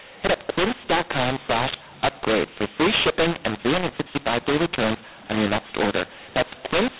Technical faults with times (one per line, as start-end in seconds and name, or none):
0.00-6.99 mu-law and A-law mixed up